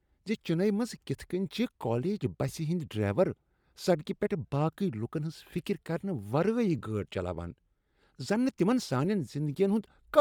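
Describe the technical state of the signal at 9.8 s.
At 9.8 s, as throughout the clip, the speech has a grainy, breathy upper edge, likely Bluetooth LC3 compression replacing discarded treble with noise, rather than the watery swirl of MP3-style codecs.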